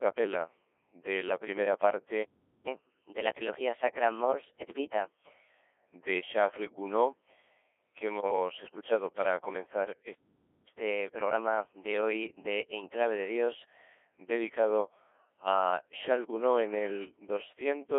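The speech has been passed through a Codec 2 vocoder, whose bitrate sounds like around 1.6 kbit/s, within a 300 Hz to 3.4 kHz telephone band. Rather than keeping the waveform, the decoder rebuilds each frame from sine waves driven only by pitch, voicing, energy and a spectral envelope, and the codec damage here is heavy: the voice comes across robotic and buzzy throughout. From 8.18 to 8.36 s there are bit errors on digital voice radio. A few percent of bits arrived flipped, and in such a low-rate vocoder each one steers a whole frame's pitch, level, voicing or spectrum. For that short stretch, which sounds like about four frames, the synthetic voice lurches in pitch and loudness, changes tone colour abruptly, and breaks into warbling, bleepy gibberish.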